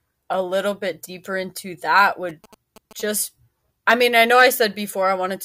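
From 2.29 to 3.02 s the speech carries GSM signalling bursts: a galloping dit-dit-dit of short buzzes at about 217 Hz, roughly 25 dB below the speech. A nearby 2G phone's signalling transmissions are being rectified by the audio circuitry.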